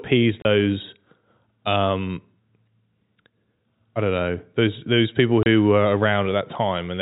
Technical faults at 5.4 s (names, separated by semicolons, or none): packet loss filled with silence